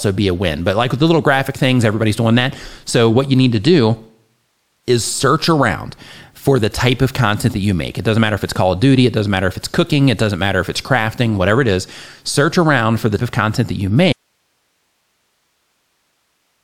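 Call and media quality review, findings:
Jump at 13.18–13.22 s after "around for the"; speech jumps ahead about 200 ms. Compressed frames skipped: roughly five 42.7 ms frames missing or rejected by the decoder.

Abrupt cut after "of content that you" at 14.13 s, only hiss about 50 dB down to the end. Audio dropout to a faint residue, likely signal lost upstream while the later path stayed live.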